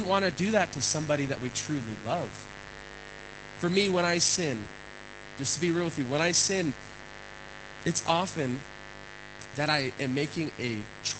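Mains buzz runs through the whole clip: switching spikes on the 50 Hz supply have leaked into the signal path, stacking up harmonics well into the kilohertz range. The result is a steady, raspy buzz sitting roughly 15 dB below the speech.

Opus voice compression also affects the speech from start to finish. The SILK coder, working in wideband, cuts everything above 8 kHz and codes the excitation coarsely, which points to a bitrate around 12 kbps. The speech sounds muffled, hoarse and somewhat robotic.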